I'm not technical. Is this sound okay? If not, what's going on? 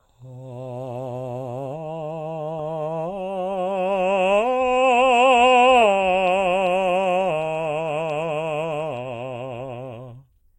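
Yes, nothing in this music stood out as a problem on listening.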